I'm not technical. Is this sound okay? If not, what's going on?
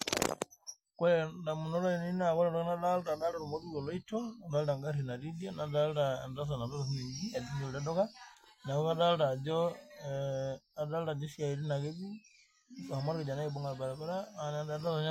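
Yes, nothing in this recording points to a technical problem with how the sound was captured, stored or played back.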